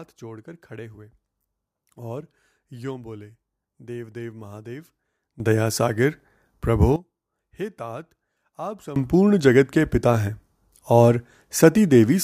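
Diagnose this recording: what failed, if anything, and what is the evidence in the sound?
Two sudden gain jumps, in the digital gain stage. At 5.4 s speech and background noise leap together by about 15 dB, falling back at 6.96 s; at 8.96 s they jump about 18 dB through to the end. Likely a gain change applied without a ramp.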